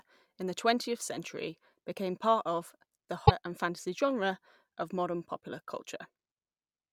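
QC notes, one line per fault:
3.23–3.31 s and 6.28–6.31 s, damaged data in a compressed stream: a short squawk cuts into the speech between "became part of the" and "and fantasy genre of", and a briefer blip follows near the end. At both points the compressed data was corrupt, so the decoder misread those frames, lost sync and produced garbled output while it hunted for the next valid frame header.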